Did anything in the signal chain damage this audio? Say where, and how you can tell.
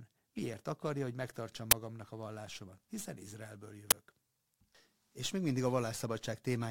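Yes. An uninitialised buffer fault at the driver or buffer stage hits this speech twice, at about 1.71 s and 3.91 s. Each time a loud burst of harsh digital noise lasts about 12 ms. That duration fits one 512-sample block, so the playback path sent a buffer out before any audio had been written into it, and whatever stale memory sat there was played as samples.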